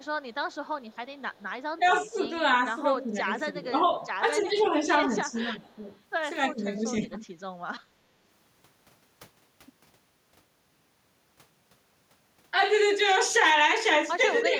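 A speech recording with two related problems, both likely coming from an echo canceller on the speakerphone side of a call. First there's echo leak: a faint delayed copy of the speech, trailing by about 316 ms and sitting very low, around 35 to 40 dB under the main signal. It runs from the very start to 1.43 s, then shows up briefly at 1.86 to 1.92 s and again at 4.38 to 4.63 s. The canceller didn't fully subtract what its microphone picked up from the loudspeaker, so a quiet residue got sent back. Second, you get speech suppressed in double talk, where the talker dips while the other side is speaking because the canceller can't tell the near voice from the echo and turns both down. That happens at 1.78 to 2.17 s, 3.05 to 4.88 s, 5.25 to 5.91 s, 6.51 to 7.16 s and 14.43 s to the end. The drops range from a few dB up to roughly 15 dB, with the deepest at 6.51 to 7.16 s.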